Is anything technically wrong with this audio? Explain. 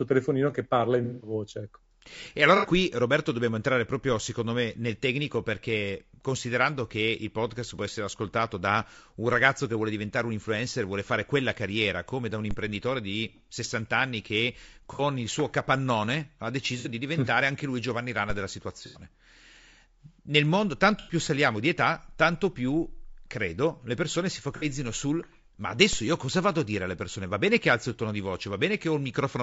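Yes. Throughout the speech there is a rough, grainy texture with noise between harmonics and a thin, synthetic top end, likely low-delay AAC compression (AAC-ELD), consistent with roughly 32 kbps.

Brief smeared, noisy patches at 1.04–1.34 s (the longest, about 180 ms), 2.57 s, 14.93 s (after "anni che", before "il suo capannone ha"), 16.79 s, 18.86 s, 20.99 s (before "saliamo di età tanto") and 24.56 s point to AAC frame loss with concealment: missing frames were filled from the last good spectrum.

A low thump at 12.51 s (after "carriera come da un") and another at 25.93 s are DC steps, where the waveform's zero line jumps and then decays away.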